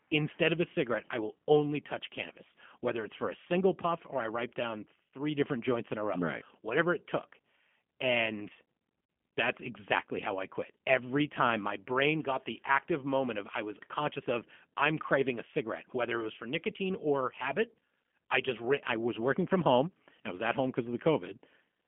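From start to finish the speech carries G.729 codec damage, clearly audible. The band stops near 3.4 kHz with almost nothing above 3.5 kHz, and little below 200 Hz. The speech is rebuilt from a vocal-tract filter and sparse pulses rather than sent as a waveform, so it sounds rough and slightly synthetic, which fits an 8 kbit/s G.729A link. A plain telephone band filter would narrow the sound in the same way but leave it smooth.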